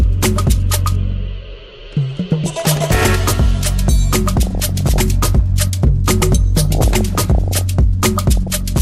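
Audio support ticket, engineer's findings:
MP2 compression throughout, likely cause: too few bits for the sub-bands, consistent with about 80 kbps. Sound dulled, upper bands flickering, granular gurgle.

DAB burbling at 2.46–3.16 s, 4.36–5.02 s, 6.61–7.61 s, 8.37–8.57 s: bit errors under one percent reaching MP2 frames. Short noise blips in single sub-bands.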